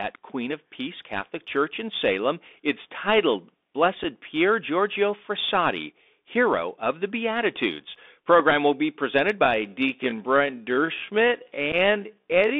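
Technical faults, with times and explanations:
Throughout: Bluetooth CVSD headset codec, its one-bit 64 kHz delta modulation confining the speech to roughly 250 Hz to 3.6 kHz, with scratchy sibilants and granular hiss.
4.04 s, 6.53 s (just before "of the") and 11.72 s: unconcealed Bluetooth headset packet loss, about 7.5, 3.8 and 7.5 ms of missing audio leaving abrupt gaps.
9.40 to 12.59 s, after "will be presented": time-stretched section, the pace abruptly slowing to about 0.61 times while pitch holds, likely from repeated short segments.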